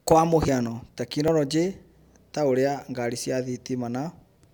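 At 0.48 s and again at 1.28 s the speech jumps ahead, losing roughly 70 ms then 20 ms, likely a dropped buffer (overrun).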